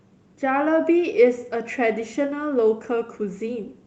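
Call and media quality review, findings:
No faults found on this speech.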